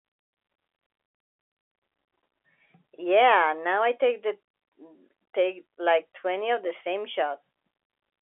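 Nothing in this speech recording stands out as a technical fault. What can be heard is ordinary fixed-line G.711 telephone coding, with the sound confined to a narrow band of roughly 300 Hz to 3.5 kHz and nothing above about 3.8 kHz.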